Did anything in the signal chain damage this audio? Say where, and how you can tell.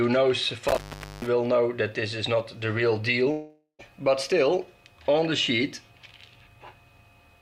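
Yes. Analogue wiring: an intermittent contact from 0.68 to 1.29 s. The sound cuts out for about 480 ms with crackle at both edges. Faint hiss remains while the line is open. A loose plug or cable briefly broke the circuit.

Network: a long network dropout from 3.31 to 3.81 s. The last sound is stretched into a fading buzz or hiss for nearly half a second, then a short silence follows. Audio resumes with that stretch missing. A likely cause is lost packets the receiver concealed.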